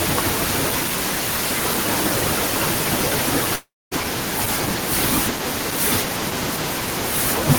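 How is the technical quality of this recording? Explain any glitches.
The recording has one clear glitch, a long network dropout in the middle of the speech. From 3.55 s to 3.94 s the speech stops. The last sound is stretched into a fading buzz. That soon gives way to about 230 ms of near silence. Speech then resumes, but roughly 360 ms of it never returns. The likely cause is a break in the stream. The receiver filled the gap by extending what it last had, then gave up.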